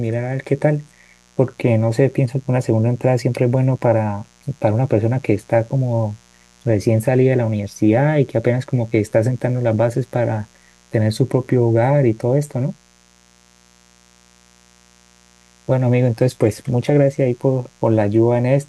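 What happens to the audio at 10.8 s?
At 10.8 s the speech sits over a mains buzz that runs through the whole clip rather than starting there. Sharp switching spikes from a dimmer, rectifier or unshielded cable ride on the 60 Hz supply, arriving twice per cycle, so the noise pulses at 120 Hz with harmonics climbing into the kilohertz range. It sits roughly 35 dB below the speech. Its raspy, edgy texture separates it from plain mains hum, which is a smooth, low tone.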